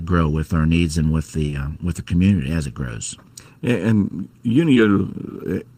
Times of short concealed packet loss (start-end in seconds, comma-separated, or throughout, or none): 1.45-1.57, 4.73-4.78